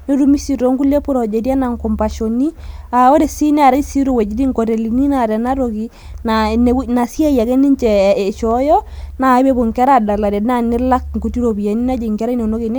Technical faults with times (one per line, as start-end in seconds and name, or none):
none